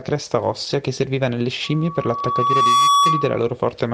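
From about 1.64 s to 3.52 s the speech is overtaken by loudspeaker feedback squeal: the mic is catching its own speaker, and around 1.1 kHz the loop gain tops one. The tone swells over roughly a second, then sits about 10 dB above the speech.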